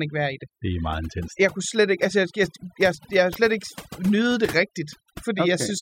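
A speech recording with two problems. Overdone noise removal runs through the whole clip. The noise reduction was set too strong, so frequency bands near the noise estimate are pushed down or cut entirely. Quiet parts of the voice vanish with them. The background drops and breaks up into twinkling, warbling specks. From 3.31 to 3.36 s there is a brief glitch. This is damaged data in the compressed stream. Corrupted bytes made the decoder misread those frames and lose sync until it found the next valid frame header.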